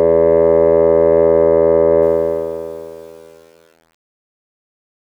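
A music clip with a fade-out that starts at about 2 s and ends at 5.06 s. From 2.02 s the fade shows truncation distortion on a fade. The gain stage drops low bits with no dither, which fits an 8-bit word length. As the level falls, the waveform collapses into coarse square steps. From 2.53 s to 5.06 s it is worst. The tail turns gritty.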